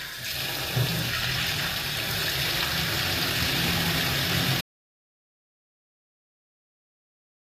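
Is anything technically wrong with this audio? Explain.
Yes, two faults are audible. HE-AAC compression runs throughout: the treble appears to be rebuilt from copied lower bands, nothing above 14.9 kHz, and the plainly audible damage fits a low bitrate near 24 kbps. Upper detail sounds gritty and metallic rather than natural.

Audio dropout to silence begins at 4.61 s and lasts to the end: the sound cuts off mid-flow into silence with no room tone, most likely because the input was lost while recording continued writing silence.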